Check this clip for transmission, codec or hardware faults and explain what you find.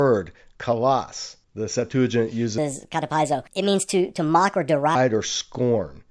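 There's one fault here, a wrong sample rate, running from about 2.58 s to 4.95 s. For that stretch the samples are being clocked out faster than they were captured, with no resampling, so everything speeds up by about 1.38 times and the pitch rises by roughly 5.5 semitones together. That ratio fits 16 kHz material being played at 22 kHz. The speech sounds high-pitched and rushed, then snaps back to normal.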